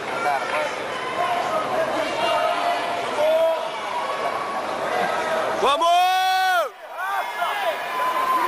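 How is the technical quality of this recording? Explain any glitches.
The quality is limited for the first 6 seconds. From 0 to 6.0 s there is an adaptive stream starting at a low bitrate. Nothing is heard above 12.1 kHz, and codec artefacts are stronger. At 6.0 s the sound suddenly improves without a gap. This points to a step from roughly 48 to 96 kbit/s AAC.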